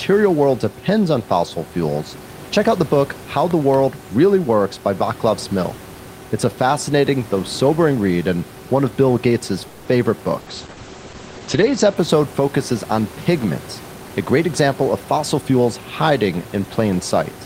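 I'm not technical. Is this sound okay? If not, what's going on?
No. At 3.51 to 3.76 s there is a loud pop, heard as two sharp clicks on top of the speech, which carries on underneath. Unlike the call problems below, nothing in the speech is interrupted. The cause is likely a plug, switch or static spark.

At 9.67 to 9.88 s comes a call audio freeze. The last sound hangs on as a fading buzz for about 180 ms, then the speech resumes exactly where it stopped. Nothing is lost; the voice just arrives a little later. The cause is likely delayed packets.

At 10.41 s and again at 10.71 s there are bursts of packet loss. Each time the sound smears into a brief buzz or hiss for about 60 ms, and the speech jumps ahead when it returns. Unlike the freeze, that 60 ms of speech is missing.

From 10.43 to 12.03 s, ending just before "focuses on pigments", there is a call bitrate drop. The connection squeezed the audio into far less data, so the voice sounds rough and muffled, with everything above 8 kHz cut off. 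Unlike the short gaps, this lasts over a second and nothing goes missing.

From 13.92 to 15.61 s, right after "focuses on pigments", there is a jitter buffer speed-up. To catch up after the delay, the call trimmed tiny slices, about 200 ms in all, so the speech runs about 11% faster. The voice isn't higher-pitched, just hurried.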